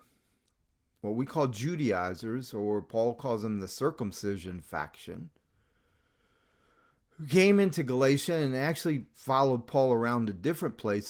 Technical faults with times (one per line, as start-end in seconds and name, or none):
none